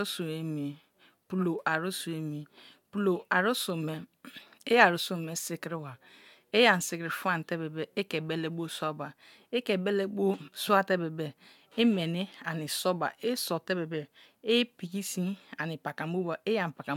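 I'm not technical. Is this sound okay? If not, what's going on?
Yes, nothing wrong can be heard here; the speech comes through steady and intact.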